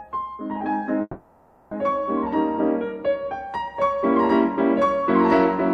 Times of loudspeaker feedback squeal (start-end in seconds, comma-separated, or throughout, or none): none